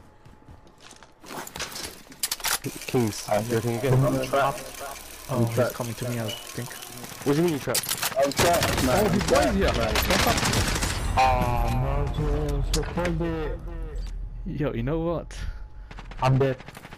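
Nothing stood out on listening; no point in the audio drew attention as a technical problem.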